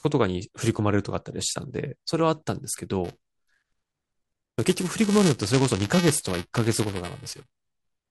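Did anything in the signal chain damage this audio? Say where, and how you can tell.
Yes. From 3.04 s to the end, the speech picks up a steady robotic buzz near 345 Hz, a rattle that rides on the signal itself. This is buffer tearing at the driver or buffer stage. The writing program and the playback hardware have drifted so their positions cross inside every period. A small slice of each buffer replays audio about 10 ms old, with hard joins either side, and the 345 Hz repeat rate fits a 128-sample buffer.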